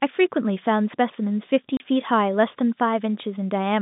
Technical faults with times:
1.77-1.80 packet loss filled with silence

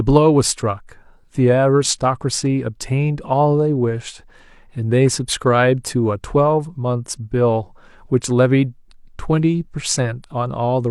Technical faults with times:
none

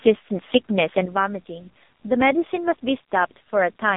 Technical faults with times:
0.00-3.96 AMR narrowband mobile codec
1.05-3.96 sudden gain jump

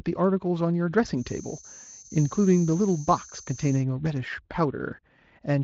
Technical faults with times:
1.13-3.86 feedback whistle
1.83-1.87 VoIP packet loss concealed by the speech codec

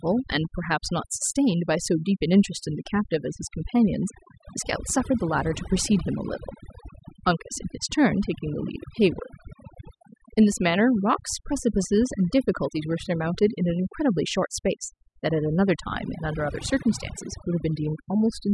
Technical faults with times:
0.00-18.54 overdone noise removal

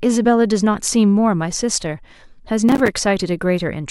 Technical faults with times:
2.69-2.88 processor overload crackle

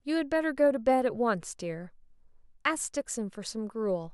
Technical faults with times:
none

